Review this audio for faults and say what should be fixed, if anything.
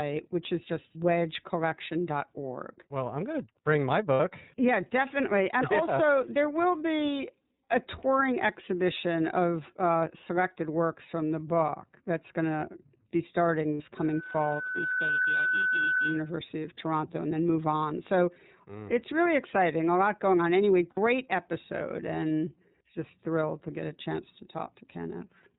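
iLBC codec, throughout: the speech is band-limited to below 4 kHz and has a slightly rough, synthetic edge, because each frame's excitation is coded on its own at a low rate. The sound fits iLBC's 13.33 kbps mode with 30 ms frames, and the coding damage is plainly audible across the whole clip. To prevent it, use a wideband codec such as Opus when the link allows.

Lost iLBC frames, at 4.14–4.20 s, 13.74–13.81 s and 20.90–20.98 s: each gap lasts about 60 ms, consistent with two consecutive 30 ms frames going missing. In each, the decoder fills in by repeating the last pitch cycle with added noise, so a brief held, buzzy vowel replaces the real audio. Because iLBC frames are decoded independently, the speech recovers cleanly as soon as packets arrive again. To prevent it, improve network reliability or add forward error correction or redundant packets.

Loudspeaker feedback squeal, from 13.97 s to 16.37 s: a single tone at 1.5 kHz swells over roughly a second until it sits at about the same level as the speech, then holds until about 16.4 s. 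The microphone is picking up the loudspeaker it feeds, and at that frequency the loop gain exceeds one, so the tone keeps reinforcing itself. To prevent it, lower the monitor gain, move the loudspeaker away from the microphone, or notch out 1.5 kHz.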